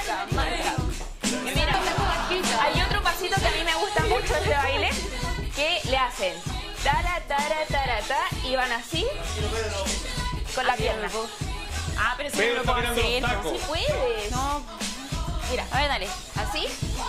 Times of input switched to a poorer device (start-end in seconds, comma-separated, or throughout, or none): none